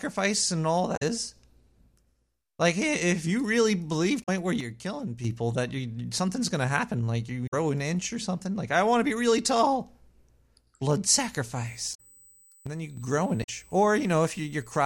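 At 0.96 to 1.03 s, right after "and all", a short glitch breaks into the speech. This is damaged data in a compressed stream: the decoder hits corrupted frames, loses sync and jumps ahead to the next valid frame header. The same fault recurs at 4.19 to 4.29 s after "if you really believe", and again at 7.46 to 7.54 s, 11.91 to 12.00 s and 13.40 to 13.49 s, each a brief blip.

From 4.61 to 5.24 s, just before "that you something's going", the level drops abruptly by about 6 dB and then returns. That step is what happens when one channel drops out of a stereo signal that is later folded to mono: the content common to both channels loses half its contribution. That is the likely cause here. A second dip of about 6 dB occurs from 12.67 to 12.97 s, which points to the same fault.

From 11.67 s to the end, a steady high-pitched whine at 8 kHz sits roughly 30 dB below the speech. This is USB whine: current drawn in 125 microsecond microframes leaks into the analogue path through the power or ground, which produces a fixed tone at 8 kHz.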